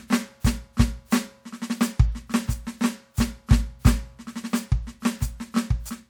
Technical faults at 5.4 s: none

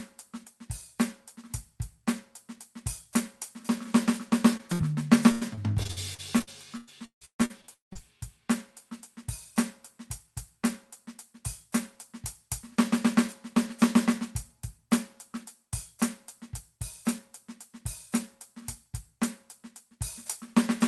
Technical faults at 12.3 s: none

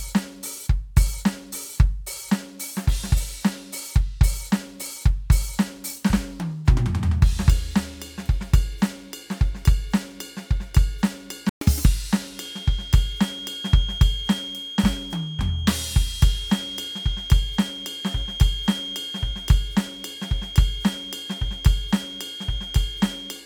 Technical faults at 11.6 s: playback stall; catch-up at higher speed

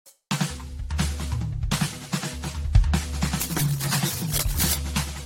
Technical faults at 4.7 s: generation loss; cable scratch noise

